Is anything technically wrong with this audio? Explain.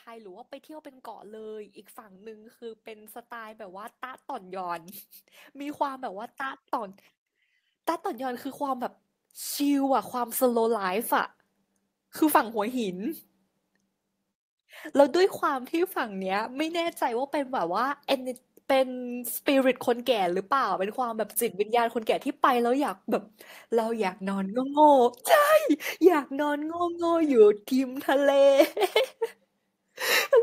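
Yes, there is automatic gain rising from 0.05 to 16.79 s. The gain control judged the input too quiet and lifted it by about 18 dB, so speech and background noise swell together; unlike a compressor, the rise is slow and ignores individual syllables.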